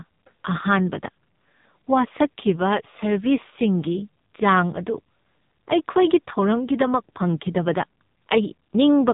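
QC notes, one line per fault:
Throughout: AMR narrowband mobile codec. Heavy low-bitrate coding, which fits a 5.9 kbps mode, rebuilds the speech from a vocal-tract model excited by a few pulses per subframe, leaving it buzzy and synthetic, with nothing above 3.8 kHz, so it sounds muffled and phone-like.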